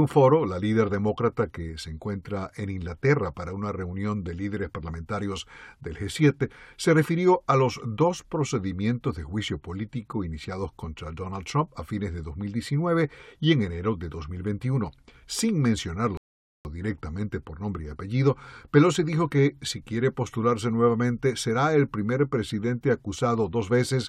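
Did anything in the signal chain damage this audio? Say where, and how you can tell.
Yes, at the playback stage: a rebuffering stall. The player drained its store of downloaded audio and had to halt until more data arrived. In this speech clip the sound drops to silence at 16.17 s and stays silent until 16.65 s, adding 0.48 s of dead air, then picks up at "directamente por nombre y" exactly where it broke off. Because nothing is skipped or repeated, this is a delivery pause rather than data loss.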